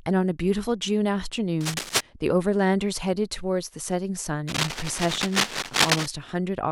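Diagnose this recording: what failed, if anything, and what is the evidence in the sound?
Cable scratch noise at 1.61 to 2.01 s and again from 4.48 to 6.07 s: dense, uneven bursts of scratching and rustling, roughly as loud as the speech itself. This is an analogue wiring fault, likely a worn cable or connector whose contact resistance fluctuated as it moved.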